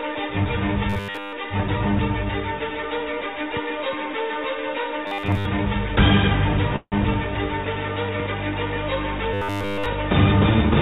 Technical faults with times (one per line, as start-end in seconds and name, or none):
0.90-1.33 robotic sound from repeated short buffers
5.07-5.45 robotic sound from repeated short buffers
6.76-6.94 call audio freeze
9.34-9.87 robotic sound from repeated short buffers